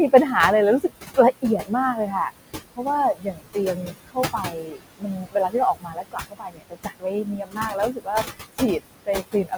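Noise suppressor artifacts run through the whole clip. The suppressor pulls steady room noise down by about 20 dB, so the background dips between phrases and rises underneath the speech.

From 0.8 s to the end at 9.6 s, the same processing cuts into the speech itself. It mistakes soft sounds for noise, dropping them by up to about 22 dB. Around four seconds in total sound swallowed or faint.

The room noise, sitting about 9 dB below the speech, is what the suppressor keeps chasing.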